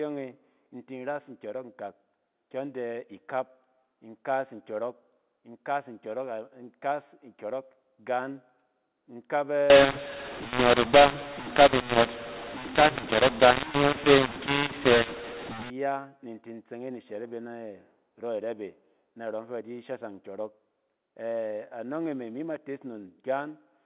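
From 9.7 to 15.7 s, mu-law and A-law are mixed up. Telephone speech coded as mu-law is decoded as A-law. Levels scramble, so the speech turns harsh and distorted. Quiet samples jump well above silence, filling pauses with noise.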